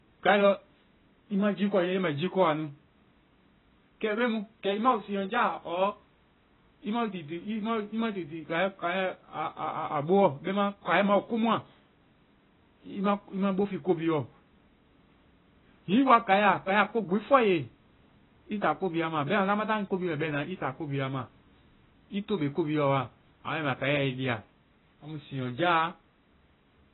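From start to end, the speech sounds dull and muffled. Nothing is heard above 3.9 kHz. Sibilants turn fizzy, and held sounds warble. The likely cause is heavy AAC compression. The damage fits a bitrate near 16 kbps, which forces a low cut-off and coarse quantisation.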